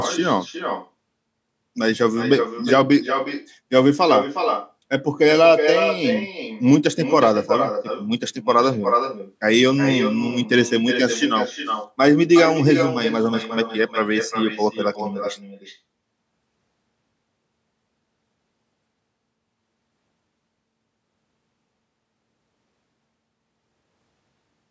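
Every phrase of this speech recording is shadowed, all the way through, by a second, thinner copy arriving roughly 0.4 s later at about 7 dB below the direct voice. That is echo with no canceller: the far end played the call over a loudspeaker, its microphone caught it, and nothing subtracted it before the network round trip returned it. The call microphone processing, with nothing above 8 kHz, can be heard alongside.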